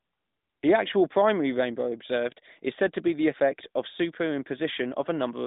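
Speech with no technical faults to report.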